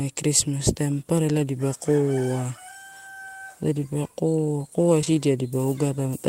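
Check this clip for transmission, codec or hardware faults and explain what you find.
Two short concealed packet losses occur in this speech, both just after "dipa koa koa". The first runs from 5.01 to 5.16 s, and the second sits inside it, from 5.05 to 5.08 s. Each time, 20 ms of audio arrived too late for the decoder. The receiver extended the preceding sound for 12 ms and then blended back into real audio, the first adding a further twenty or so milliseconds. It is heard as a brief smear or wobble in the speech.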